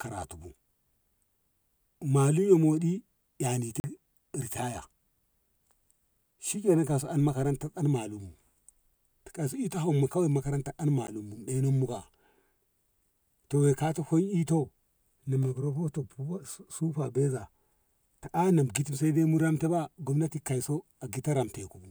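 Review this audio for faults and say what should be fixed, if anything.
Two short dropouts break the speech: a brief hole from 3.80 to 3.84 s, about 40 ms, and a single tick at 11.07 s, only 10 ms long. Both are blocks of digital silence, where a run of samples was replaced by zeros. The audio cuts to silence and back with no fade. The longer block reads as a gap, the shorter as a tick.

To prevent it, give the audio thread enough buffer headroom and guard the processing against invalid values so every output block is filled in time.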